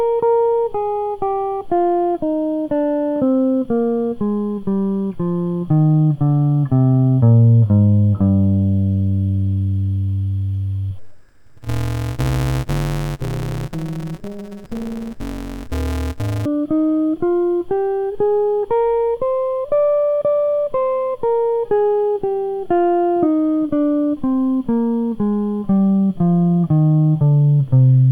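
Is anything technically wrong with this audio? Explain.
Yes. From 10.98 to 16.46 s the music turns dull and robotic, with a buzz at about 188 Hz: interleaved audio read as planar. Each short block, which fits a 256-sample buffer of 5.33 ms, has its alternating left and right samples split into halves, so it buzzes at the block rate rather than dropping an octave.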